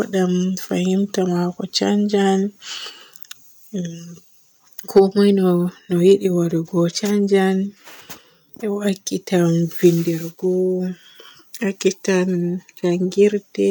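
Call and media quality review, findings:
Hard clipping, 4.97–5.00 s: brief crackle on a speech peak, about 30 ms. Probable component: capture gain stage or converter ahead of encoding, overdriven by about 4 dB, so peaks are cut flat and add high harmonics. Distinguishing: an abrupt, gritty edge rather than limiter pumping or smeared codec warble. Confined to one peak, not a constant fuzz.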